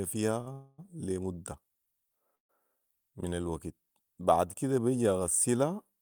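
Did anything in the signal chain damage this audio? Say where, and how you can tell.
Yes. The damage happens at the network stage, in the receiver's jitter buffer. At 0.41 to 0.48 s the speech hangs on one sound for about 50 ms, with a faint buzzy sustain, and then carries on where it left off with nothing skipped. That is a short stall from a late packet. The packet missed its playout time, the buffer ran dry, and the receiver stretched the last sound to bridge the wait. Everything after it plays 50 ms later.

Two longer call audio freezes follow. From 0.52 to 0.80 s the sound is drawn out into a smeared continuation for 258 ms, with only a 10 ms moment of silence. From 2.35 to 2.51 s the audio stops for 139 ms, nearly all of it silent (130 ms). In both cases speech resumes at the exact point it halted, so a gap has been inserted and nothing is lost. The likely cause is packets held up in transit long enough to empty the jitter buffer, so the receiver filled the wait and then continued.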